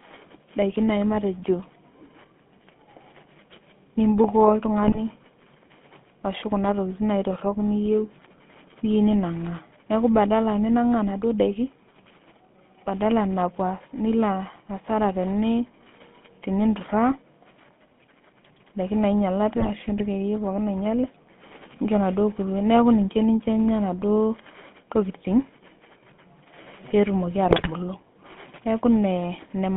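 From start to finish the speech carries the sound of the GSM full-rate codec. The band runs from about 150 Hz to 3.6 kHz, consistent with a 13 kbps full-rate link. A vocal-tract model driven by sparse, regular pulses gives a clearly buzzy, gravelly roughness.

GSM bit errors break in three times: 4.83 to 4.99 s, 19.56 to 19.71 s, and 27.46 to 27.68 s. Corrupted filter, pitch and gain values reach the decoder. The voice squawks, pops and gargles. The last burst is the longest.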